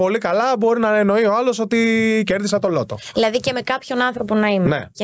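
The audio pumps with gain throughout: the level drops by something like 15 dB the moment a loud sound arrives, leaving loud and soft passages squashed toward one level. This gain pumping likely comes from input gain set far too high, with a fast limiter clamping down on each peak. Unlike a noise gate, the background never cuts to silence. The call-style microphone processing carries nothing above 8 kHz.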